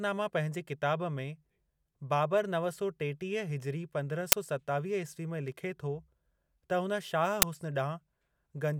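At 4.32 s, just before "सतावीह ईस्वी में लिखे", and again at 7.42 s, right after "हुन शाह", you get a loud 10 ms crack. That's an uninitialised buffer: a block got played before any speech was written into it, so leftover memory came out as loud garbage.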